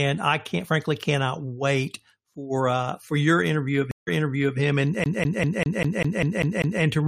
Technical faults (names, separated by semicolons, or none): stream reconnect; CD stuck on one turn